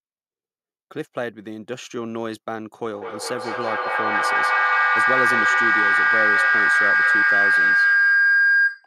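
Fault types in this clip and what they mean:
Feedback howl: from 2.85 s, sound circling between a mic and a nearby speaker gains level each trip, building into a tone around 1.5 kHz that pulses roughly every fifth of a second, peaks about 10 dB over the speech, and runs to the end.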